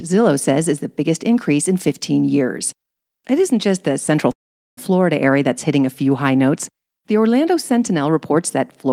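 A speech recording, at 4.31 s the sound stretches into a brief fading continuation of the last sound, then goes silent for about 420 ms before resuming at 4.79 s, later by 459 ms with nothing lost: a call audio freeze, likely from delayed packets emptying the jitter buffer.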